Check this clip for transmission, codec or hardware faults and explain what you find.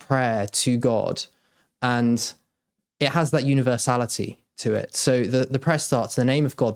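No transmission, codec or hardware fault is audible anywhere in this speech recording.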